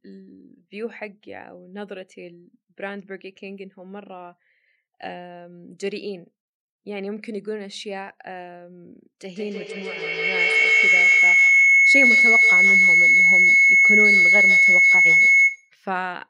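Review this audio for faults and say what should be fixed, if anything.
Feedback howl runs from 9.34 to 15.83 s. A microphone picks up a loudspeaker in the same room, and each trip round that loop comes back louder. The sound narrows to a tone near 2 kHz. The loop repeats roughly every 150 ms, and the howl peaks about 14 dB above the speech. Muting one device or using headphones breaks the loop and prevents it.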